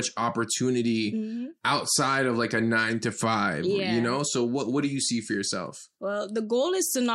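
No technical faults can be heard anywhere in the recording; the speech signal stays intact and continuous throughout.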